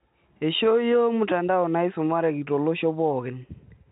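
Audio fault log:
No fault is heard anywhere in this speech clip. The G.711 telephone coding shows only in the band ending around 4 kHz and a faint hiss that rises and falls with the level of the speech.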